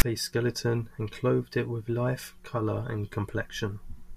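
At 0.0 s, before the speech begins, file tags played as audio: a block of text tags decoded as samples gives a brief, loud rasp. On the waveform it shows as a hard-edged burst pushed off-centre; the spectrogram shows a broadband smear.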